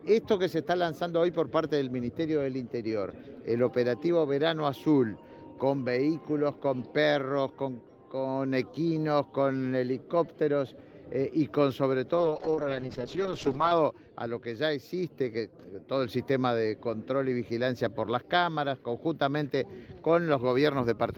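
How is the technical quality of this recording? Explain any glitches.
Quality is compromised by one call bitrate drop, 12.16 to 13.79 s: the bandwidth estimate fell and the encoder coded far more coarsely, which fits a slide from about 32 kbps to 8 kbps for roughly 1.6 s. The sound turns rough and muffled, and a spectrogram shows the high band cut away.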